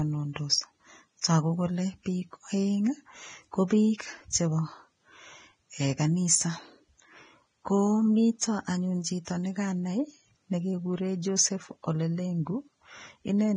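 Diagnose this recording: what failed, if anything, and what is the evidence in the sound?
Codec stage. Nothing sounds above 9.7 kHz throughout, and treble is grainy hiss. Likely Vorbis compression near 22 kbps, quantising fine detail into noise.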